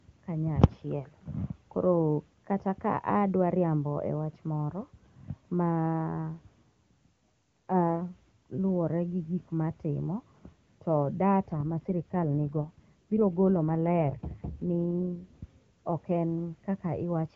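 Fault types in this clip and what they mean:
AMR rate drop: From 11.52 to 15.24 s the speech turns rougher and more synthetic, then clears again. The sound points to the link pushing the AMR-WB codec from its top rate down to about 8.85 kbit/s, giving bits to error protection instead of the voice. Unlike a switch to narrowband, the top end stays as wide as the clean HD Voice passages around it, and unlike packet loss there is no gap or dropout.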